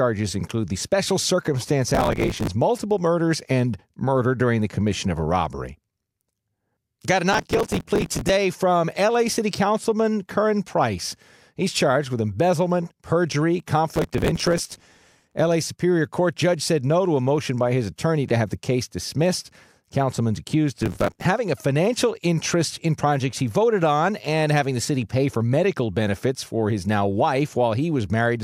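Processor overload crackle hits the speech at 1.91–2.47, 7.33–8.30, 13.92–15.34 and 20.82–21.25 s: dozens of missed short buffers, around 5 ms each, get filled with stale audio, giving gritty, tearing crackle.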